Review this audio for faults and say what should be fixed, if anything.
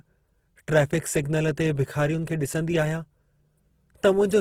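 Throughout the speech, what is likely Opus compression in its music mode runs short of bits, so the encoder keeps each band's energy but fills the shortfall by folding lower bands upward or substituting noise. The result is plainly audible roughness and grain rather than swirling. The bandwidth stays full, reaching about 20.3 kHz, and the degree of grain fits a rate near 16 kbps. To prevent it, encode at a higher Opus bitrate or work from an uncompressed master.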